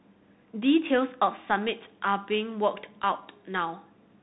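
Throughout the speech, a Bluetooth CVSD headset codec is plainly audible. It tracks the waveform one bit at a time, which fits a 64 kbps stream, with the step adapting. Nothing passes above 3.8 kHz, so the spectrogram shows a hard ceiling there. Steep loud passages outrun the step, and s sounds turn scratchy over a granular hiss.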